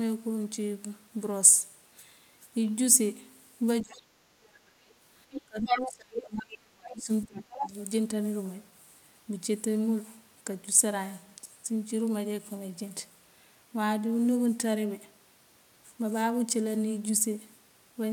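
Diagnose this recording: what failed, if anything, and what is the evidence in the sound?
Call processing is where this fails. The talker's speech is suppressed in double talk twice: from 3.82 to 4.56 s it sinks by up to about 35 dB, with most of that span affected, and from 5.46 to 7.73 s it drops by about 30 dB and stays pulled down or broken for around two seconds. The pattern points to an echo canceller that likely could not tell the near talker from loudspeaker echo while both sides spoke and attenuated everything.

The same stage lets the other side's voice leak through in four places: a brief scrap at 4.89 to 4.94 s about 35 dB under the talker, a long stretch from 5.31 to 6.21 s at roughly the talker's own level, a short burst at 6.82 to 6.91 s about 20 dB down, and 7.23 to 7.67 s only about 5 dB down. This is likely residual far-end echo that the canceller failed to subtract from the microphone signal.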